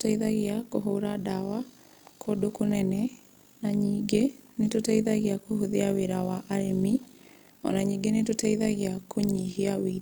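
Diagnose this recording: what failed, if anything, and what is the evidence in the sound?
A rough, buzzy tremolo runs through the speech from start to finish, the level pumping by about 11 dB at a rate of around 50 Hz, which gives a robotic flutter. This is overlap-add ripple from a frame-based processing stage, most plausibly call processing: frames were windowed and resynthesised with an overlap whose windows don't sum to constant gain, so loudness dips once per frame. That rate points to a hop of roughly 20 ms.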